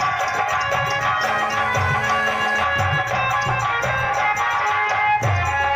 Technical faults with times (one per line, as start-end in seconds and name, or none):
1.23-2.64 GSM phone buzz